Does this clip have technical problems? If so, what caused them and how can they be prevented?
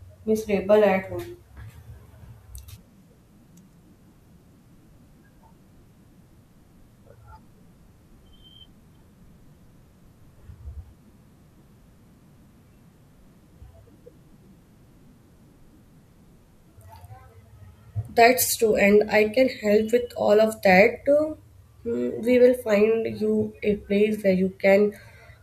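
No, the clip has no technical problems. There is nothing here that needs a cause traced or a fix put in place.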